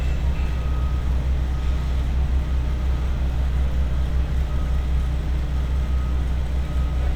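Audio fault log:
No faults heard anywhere in these everyday sounds.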